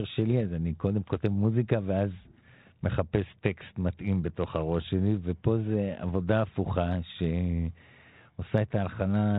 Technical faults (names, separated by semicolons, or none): none